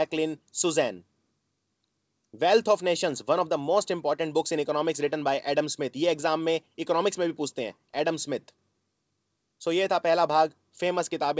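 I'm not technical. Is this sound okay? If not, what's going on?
Yes, nothing in this clip points to a problem. It went through an ordinary internet call connection, which is why it sounds like a phone call, with nothing above about 8 kHz, so it lacks some of the airy top end a studio recording would have.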